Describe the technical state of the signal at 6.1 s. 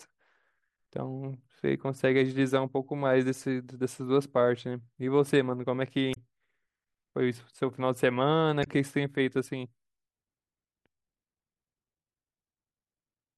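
Damaged data in a compressed stream occurs from 6.13 to 6.17 s, a 40 ms stretch of the speech. Corrupted bytes make the decoder misread those frames and lose sync until it finds the next valid frame header, leaving a brief glitch.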